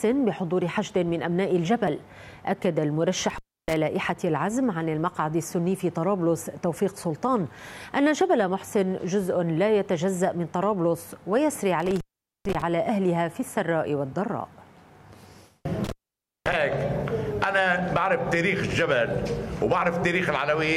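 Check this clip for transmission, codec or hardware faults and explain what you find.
The clip has one hardware fault, an intermittent contact, occurring three times: 3.3 to 3.76 s, 11.8 to 12.62 s, and 15.84 to 16.53 s. A loose plug or cable momentarily loses connection, so the signal path opens and the audio drops out for roughly 0.30 s, 0.45 s and 0.54 s respectively. Each gap is bracketed by crackle as the contact breaks and remakes, with faint hiss audible while the line is open.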